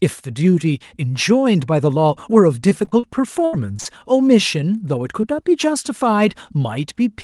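From about 2.69 to 3.05 s there's a stretch of repeated packet loss (robotic sound). Four gaps in quick succession, the longest about 37 ms, add up to roughly a tenth of a second of missing audio. The receiver patches each one by stretching the last bit of sound, so you get a choppy stutter. About 28% of that span is filled-in guesswork rather than real signal.

It happens again from about 3.45 to 3.87 s, and it's worse this time. There are four more gaps, one about 78 ms long, about 0.16 s missing in total, and about 38% of the span concealed. With holes that long, the fill is choppier still. You can hear chunks simply not there.

At 5.21 to 5.25 s there's a short concealed packet loss. Only about 20 ms went missing, and the decoder bridged it by continuing the preceding sound and then blending back in. It comes across as a quick little smear or wobble, the kind of thing that can swallow a consonant. 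Underneath all of this the call codec is audible in the usual way, with the top end stopping around 12 kHz.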